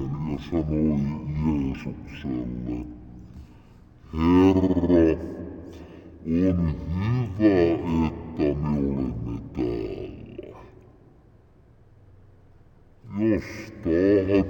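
From the start to the end of the clip, the audio shows a stereo-read-as-mono fault. The interleaved left and right samples have been taken as consecutive samples of one channel, so each stereo frame becomes two mono samples. Played at the intended rate, everything runs at 0.5 times normal speed and sits 12 semitones lower, a full octave down. The result sounds slow, dragged out and heavy throughout.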